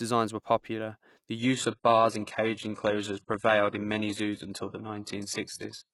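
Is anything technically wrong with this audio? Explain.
Yes. From 1.39 s, just after "popular the", to the end, the adaptive stream drops to a lower bitrate. A slowed connection made the player switch versions without a gap. Quality falls suddenly. Nothing remains above 11.5 kHz, so the treble drops, which fits a very low-bitrate HE-AAC stream.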